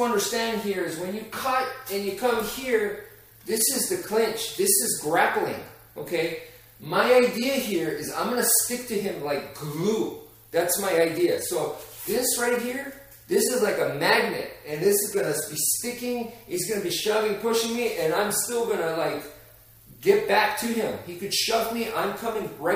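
Nothing goes wrong anywhere along the way here, so there's no fault to point to at any moment in the recording.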